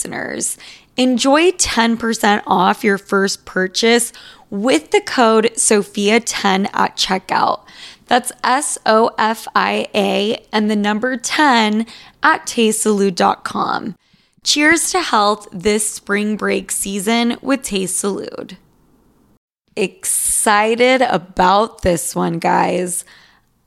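Listening to the speech in this recording, nothing technical stood out as a problem at any point.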